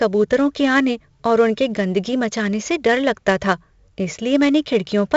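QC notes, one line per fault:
Throughout, 4-bit ADPCM compression. Each sample is coded as a coarse 4-bit step from a prediction, so gritty hiss rides on every loud passage of the speech. Sharp onsets distort. Nothing reaches above 7.7 kHz, which fits a 64 kbps stream.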